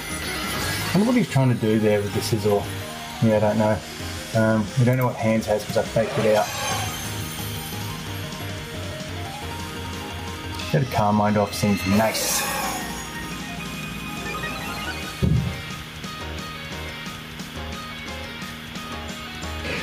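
Gain pumping runs throughout. The level swings around 10 dB. The likely cause is excessive input gain hitting a fast limiter.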